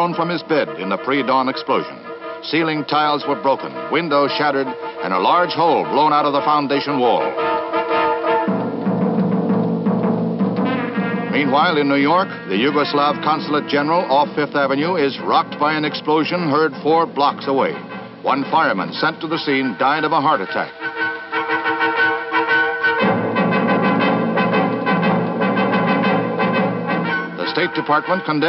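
No technical faults can be heard anywhere in the recording. Nothing breaks into the audio at any point, and no problem turns up that would need describing.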